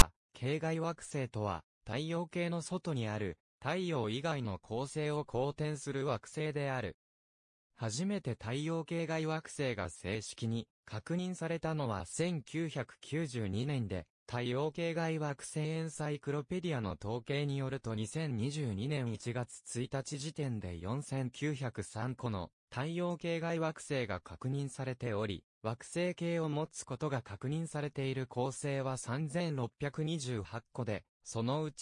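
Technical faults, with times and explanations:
0.0 s, file tags played as audio: the clip opens with a brief, loud rasp, about 15 ms long, with hard edges at both ends. A block of text tags at the head of the file was read as sample data, and since character bytes cluster in a narrow range, the waveform shows a dense, jagged burst sitting off-centre from zero. On a spectrogram it appears as a thin broadband vertical stripe at the very start.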